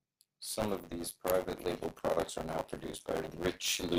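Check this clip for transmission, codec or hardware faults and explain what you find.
Yes, there are two problems here, one running the whole way through and one that shows up twice.

Buffer tearing runs the full length of the speech. The writer and the hardware reader have slipped out of step, so roughly a fifth of each buffer replays audio from about 20 ms earlier, with hard edges on both sides. You hear it as a steady robotic buzz at 100 Hz that's there whenever sound is playing. That rate points to 10 ms buffer periods.

A corrupt frame decoded shows up at 0.89 s, right before "these private label products", and again from 3.21 to 3.26 s, just after "label products are now". In each spot a couple of compressed frames had flipped bits and were played anyway, which put energy at the wrong frequencies and left a short glitch.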